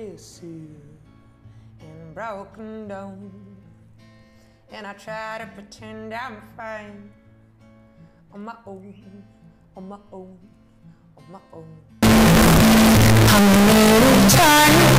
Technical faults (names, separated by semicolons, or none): float read as integer